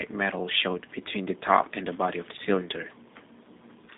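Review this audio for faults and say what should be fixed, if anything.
The whole clip has that G.729 codec sound: speech rebuilt from a vocal tract model and a few pulses per frame, which fits an 8 kbit/s VoIP link. It comes across rough and slightly synthetic, squeezed into roughly 150 Hz to 3.7 kHz with nothing above 3.8 kHz. Next time, record straight to a wideband or lossless path rather than through a narrowband phone codec.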